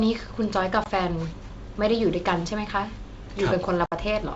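Around 0.84 to 0.87 s, and again from 3.86 to 3.93 s, there's packet loss on an ADPCM call: hard-edged silent gaps of about 20 ms and then 60 ms (roughly one and three packets' worth). The decoder's predictor and step size lose track, so the speech comes back slightly distorted before settling.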